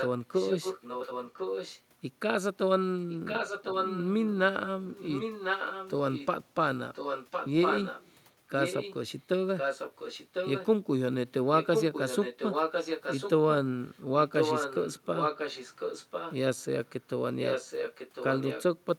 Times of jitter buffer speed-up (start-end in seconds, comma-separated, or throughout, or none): none